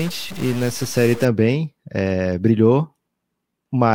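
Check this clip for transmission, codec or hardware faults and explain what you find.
One fault is present, in the opening stretch of the speech. From 0.0 to 1.25 s the audio carries a harsh, buzzy distortion, and the gaps between phrases fill with a steady noise floor at around -30 dBFS instead of falling quiet. This points to a stuck bit, likely a single data line held at a fixed value in the converter or its wiring. Roughly half the samples are pushed off by that bit's fixed weight, so the error follows the waveform and turns into grating distortion. Near silence, the stuck bit flips relative to the sign of the tiny signal, producing the noise heard in the pauses.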